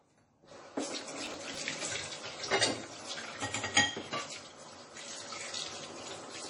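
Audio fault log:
Throughout: MP3 compression, likely heavy. Nothing sounds above about 10.5 kHz, so the top of the sound is cut off flat, and the rest has a watery, swirling quality. That fits a low bitrate near 32 kbps, where the encoder runs short of bits, drops the treble at a fixed point and lets weaker frequency components blink on and off between frames. Sharp attacks come out softened and smeared.
1.26 to 1.58 s: processor overload crackle. For about a third of a second a gritty tearing crackle rides over the sound, then stops. The audio repeatedly jumps back to fragments it has already played, each fragment hard-edged at both ends. That points to a processor missing several deadlines on buffers of roughly 5 ms, replaying stale audio each time, so the string of abrupt splices runs together into a single burst of crackle.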